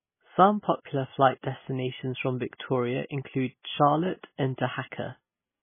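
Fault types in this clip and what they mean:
MP3 compression: The speech has nothing above 3.5 kHz and heavy codec damage throughout, likely from MP3 encoding at a bitrate as low as 16 kbps. With so few bits, the encoder drops all treble above a fixed point and zeroes weaker frequency lines that flicker frame to frame, giving a watery, swirly tone with smeared consonants. A spectrogram shows a hard ceiling at 3.5 kHz and patchy, blocky holes below it.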